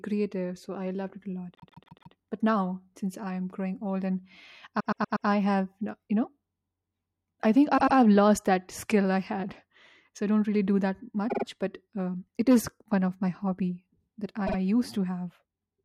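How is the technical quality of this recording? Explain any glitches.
The speech stutters five times from repeated frames. Short blocks replay back to back: 144 ms four extra times at 1.55 to 2.13 s, 120 ms four times at 4.79 to 5.27 s, 96 ms twice at 7.77 to 7.96 s, 48 ms three times at 11.29 to 11.44 s, and 48 ms twice at 14.46 to 14.56 s. The same compressed frames were decoded again, so each repeat is heard as a stammer. Every repeat adds time to the speech, from 96 to 576 ms. The block lengths fit frames of about 24 ms.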